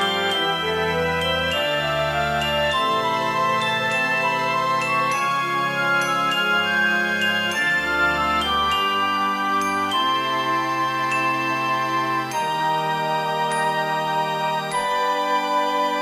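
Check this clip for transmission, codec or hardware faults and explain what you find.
One fault runs the whole length: grainy, signal-following distortion, likely from low bit depth without dither, rounding to about 7 bits, error roughly 30 dB below.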